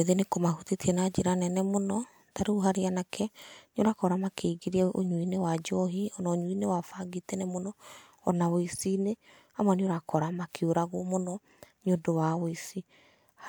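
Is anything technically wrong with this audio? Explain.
No, nothing technically wrong is audible anywhere in this speech recording.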